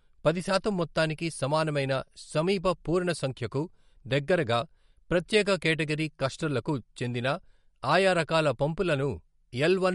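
From start to finish the speech carries plainly audible MP3 compression damage, likely from a low-bitrate encode, and the sound fits something around 48 kbps. Nothing comes through above 11.2 kHz, so the top end is simply gone. With bits that scarce, the encoder drops weaker frequency lines and lets them flicker in and out between frames, which gives the audio that watery, swirly texture and softens the attacks.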